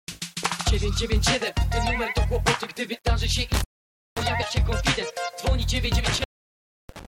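Low bit depth without dither runs from start to finish: quiet stretches turn grainy and the fainter parts sputter or fall to silence, with a rough distortion that rises and falls with the sound itself, sitting around 35 dB below the signal. The likely cause is the audio being rounded to about 8 bits with no dither, so the rounding error tracks the waveform instead of spreading into a steady, neutral hiss.

Intermittent contact breaks in at 3.54 s and lasts to about 4.26 s, and strikes again from 6.05 s to 7.05 s. Each time a loose connection opens, crackle marks the edges and the sound drops away for roughly half a second in the first event and about 0.65 s in the second, leaving only faint residual noise while the circuit is open before the signal snaps back.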